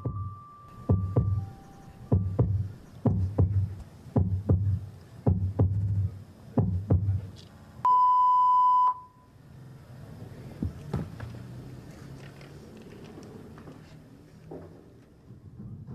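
Repeated frames occur at 1.67 to 1.86 s, 5.76 to 5.97 s, 7.55 to 7.76 s and 9.62 to 9.75 s. A short block of compressed audio is decoded again immediately, producing a stuttering loop: a 93 ms block plays twice more, two 70 ms blocks three times more each, then a 46 ms block three times more. Each stutter adds its repeats to the timeline, about 0.14 to 0.21 s apiece.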